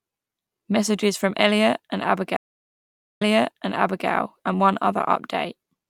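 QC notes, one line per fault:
2.37–4.08 s, stream reconnect: speech drops to silence for 0.83 s, then resumes 0.89 s earlier than where it cut, so a chunk repeats. The connection broke, the player reconnected, and the server resent a burst into a fresh decoder that eases back in.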